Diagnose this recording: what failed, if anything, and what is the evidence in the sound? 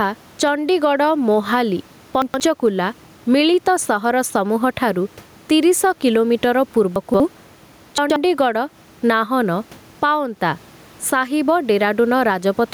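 Gain pumping runs throughout the speech, with the gain swinging about 10 dB, likely from excessive input gain driving a fast limiter in call processing.

Chunks out of order at 2.22–2.4 s, 6.96–7.2 s and 7.98–8.16 s sound jumbled. In the buffer or storage stage, 60 ms blocks played two or three positions late.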